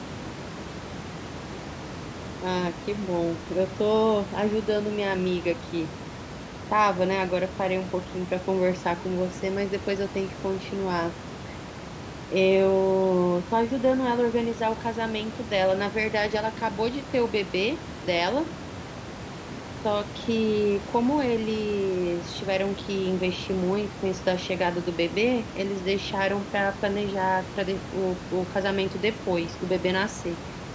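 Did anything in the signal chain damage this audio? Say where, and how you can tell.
No, nothing in the chain stood out on listening: the room noise sits about 10 dB below the speech and is part of the recording, and the call microphone processing leaves nothing above 8 kHz, which is normal for that stage.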